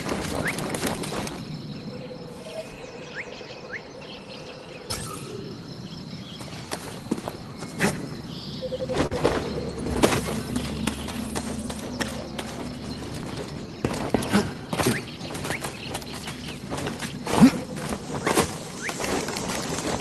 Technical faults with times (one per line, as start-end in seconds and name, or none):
0.00-20.01 clock drift between sender and receiver
0.96-8.09 repeated timing corrections
9.06-9.14 short stall from a late packet
10.86-19.64 repeated timing corrections